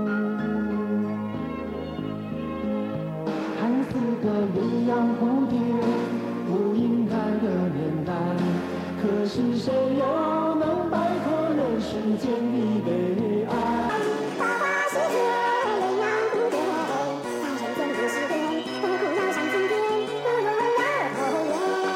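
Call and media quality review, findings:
Section at the wrong speed, 13.89 s to end of clip. Sound jumps to 1.8x speed, pitch up by close to ten semitones. Likely cause: playback or editing clock mismatch on that segment. Tempo and pitch shift together, abruptly, which rules out a pitch shifter or a time-stretch, where one changes without the other.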